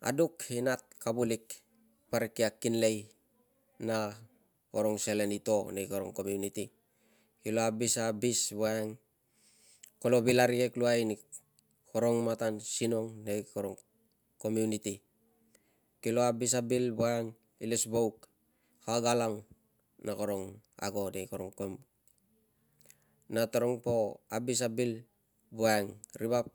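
No audible technical faults.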